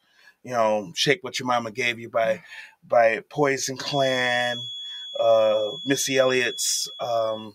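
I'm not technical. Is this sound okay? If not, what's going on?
No. A noise suppressor meant for speech has been left running on this sound. It treats steady, lingering parts as noise and keeps pulling them down by varying amounts, so throughout the clip the level gently pumps and held sounds thin out.

At two points the suppressor cuts the sound itself: from 0.01 to 0.46 s, and again from 2.67 to 2.88 s. In both places it mistakes the sound for noise and pushes it down sharply, so the audio briefly sinks.

From 3.78 s to the end, a thin, steady high whistle at 3.4 kHz sits quietly behind the sound, swelling and fading slowly in level. This is a feedback whistle, likely from a loudspeaker feeding back into the microphone, just short of howling.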